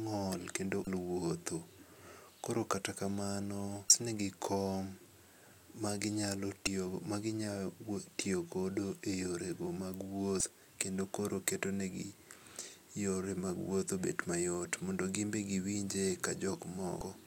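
Short glitches break into the speech five times, each lasting about 34 ms: at 0.84–0.87 s, 3.87–3.90 s, 6.64–6.67 s, 10.37–10.41 s and 16.98–17.02 s. This is damaged data in a compressed stream. Corrupted bytes made the decoder misread those frames, so it lost sync until it found the next valid frame header and resumed normal playback.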